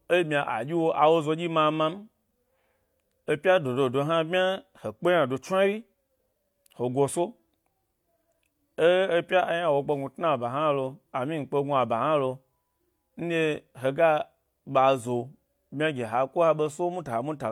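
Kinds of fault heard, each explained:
No faults detected in this speech recording; nothing to report.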